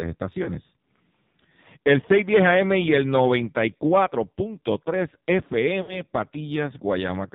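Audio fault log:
throughout: AMR narrowband mobile codec. Nothing above 4 kHz survives, so the speech sounds thin and boxed in. The codec models the vocal tract and excites it with a few pulses per subframe. Here very few bits are spent on that, and the result is heavy damage: a buzzy, synthetic edge to the voice. The degradation fits one of the lowest AMR-NB modes, around 5.9 kbps.
0.44–0.50 s: lost AMR speech frames. There is a brief dip or warble lasting about 0.06 s. That fits a single 20 ms frame failing its checksum. The decoder repeats the last good pitch and vocal tract settings at lower gain, so the gap is smeared over rather than silent.
5.82–6.01 s: lost AMR speech frames. This is a longer run of about 0.2 s. The sound stretches out and fades as the concealment gain falls, which fits about three consecutive frames. Speech then returns briefly weak or rough.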